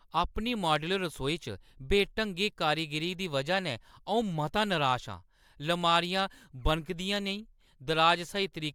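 No technical faults can be heard anywhere in the speech.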